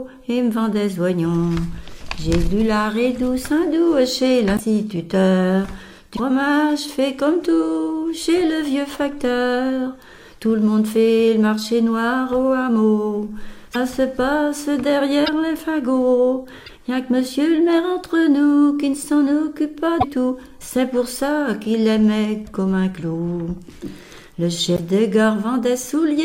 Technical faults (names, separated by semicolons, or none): broken MP3 bit reservoir